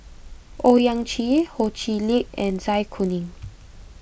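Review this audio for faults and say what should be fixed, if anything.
There's a 50 Hz buzz under the speech throughout, from the resampler restarting on every 20 ms block, so each block edge picks up a small error. It sounds like a downconversion, probably 48 kHz to 16 kHz. To fix it, run one continuous resampler across the whole stream and carry its filter state between blocks.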